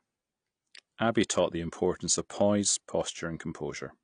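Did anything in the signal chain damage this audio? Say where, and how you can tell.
Yes, at the codec stage: AAC compression runs through the whole speech clip. Nothing survives above about 9.8 kHz, and the sound is dull, smeared and fizzy on sibilants. That's likely a low-bitrate AAC-LC encode, roughly consistent with 32 kbps, quantising too coarsely.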